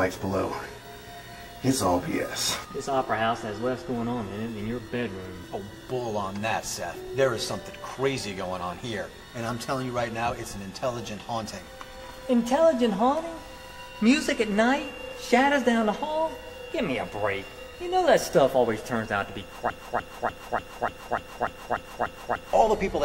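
At 19.70 s the audio locks into a broken-record loop that runs until 22.53 s. A fragment about 0.29 s long repeats exactly, back to back, ten times, producing a rigid stuttering pulse with no variation between cycles. The likely cause is a stall in the player, encoder or stream, which kept resending the last fragment it held. Whatever sound belonged in those 2.8 seconds is missing from the clip.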